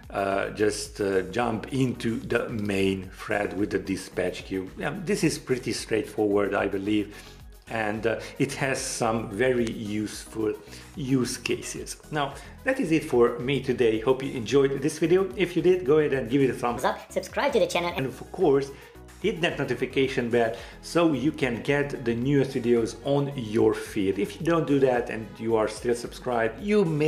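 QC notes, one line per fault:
16.77–17.99 s, section at the wrong speed: for about 1.2 s the sound runs 1.37 times too fast, so it turns hurried and rises about five semitones before dropping back to normal pitch and pace at the far edge. This is likely a playback or edit step clocking that stretch at the wrong rate. On a spectrogram every harmonic band steps upward and spreads apart for that span. In the waveform the cycles and envelopes look compressed in time.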